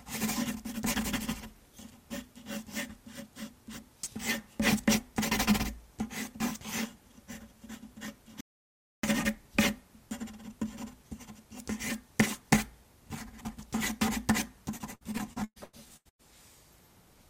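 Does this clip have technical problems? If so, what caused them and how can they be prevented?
Yes, there are two faults. At 8.41 s the audio stops dead and stays silent until 9.03 s, a gap of about 0.63 s, then carries on. This is a playback stall, most likely the player's buffer running dry or its output thread being held up. Unlike packet loss, nothing is patched or smeared: there is one clean hole of true silence. A larger playback buffer and keeping the audio thread free of blocking work would prevent it.

From 14.77 s to 16.21 s the sound turns choppy. This is repeated packet loss (robotic sound). Nine short holes follow one another closely, the longest about 0.12 s. The receiver fills part of each hole by stretching the last bit of sound, about 0.52 s in all, roughly a third of the stretch, and the other 0.54 s is simply missing. The smeared repetitions set it apart from a stall's single silence. 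A more reliable network path, a deeper jitter buffer and forward error correction would prevent it.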